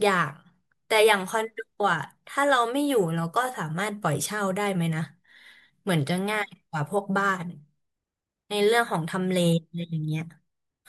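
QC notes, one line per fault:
Nothing stood out on listening to the speech.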